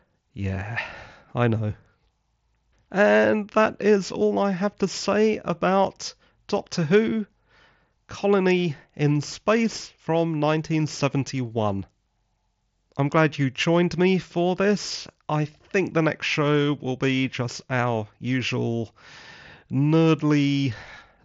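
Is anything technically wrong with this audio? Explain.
No, nothing here is actually wrong: it's speech carried over a Bluetooth mSBC headset link, so the sound simply stops at about 7.7 kHz, which is what that wideband headset codec is built to pass.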